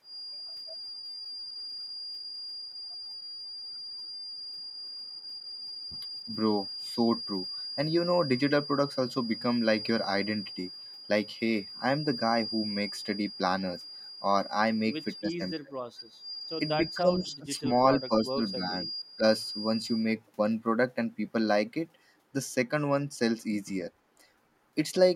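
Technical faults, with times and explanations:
0.00–20.13 s, feedback whistle: A thin, steady tone at 4.8 kHz sits behind the speech, about 15 dB below it. It swells and fades slowly in level but never grows. Then it stops, well before the end. This is likely a loudspeaker-to-microphone loop held just at the edge of feedback. One frequency keeps circulating and sustaining itself without running away, which is why it sounds like a fixed whistle rather than a rising howl.
2.70–2.75 s, 5.21–5.58 s, 6.20–6.29 s, 15.17–17.65 s, 18.00–19.23 s, speech suppressed in double talk: The talker's level dips in these spots. The early ones are brief, shallow losses of about 5 to 10 dB. From 15.17 to 17.65 s the speech drops by up to about 25 dB and is affected for around two seconds. At 18.00–19.23 s it drops by about 15 dB. The likely cause is an echo canceller that could not tell the talker from the far-end echo and turned both down.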